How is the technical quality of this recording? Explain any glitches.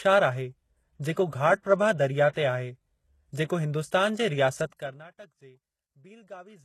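The speech is clearly degraded by lossy coding throughout, with two brief pre-echo glitches.

The whole clip carries plainly audible HE-AAC compression damage. Nothing is present above 12.3 kHz. The likely cause is spectral band replication: the treble is rebuilt from copied lower bands, so its harmonics don't align. This fits a low bitrate, around 16 kbps.

Pre-echo occurs at 3.33 to 3.36 s, spreading 24 ms just before "जेको हिन्दुस्तान जे", and at 4.77 to 4.80 s, spreading 30 ms. The codec spreads noise across a block. A short hiss therefore precedes each attack, which sounds smeared.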